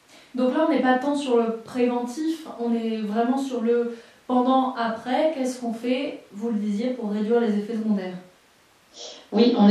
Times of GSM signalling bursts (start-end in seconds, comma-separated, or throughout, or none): none